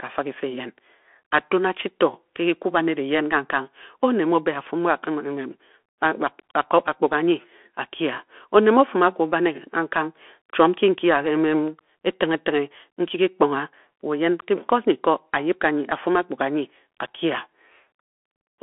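A speech clip carrying the Bluetooth CVSD headset codec from start to finish. The sound is confined to a telephone-style band of roughly 250 Hz to 3.4 kHz, and a spectrogram shows a hard ceiling with nothing above 3.8 kHz, consistent with a 64 kbps CVSD link. Because each sample only steps up or down, loud, fast-changing sounds outrun the adaptive step and distort, s sounds turn scratchy, and a grainy hiss sits beneath the speech, visible as a speckled noise floor across the band.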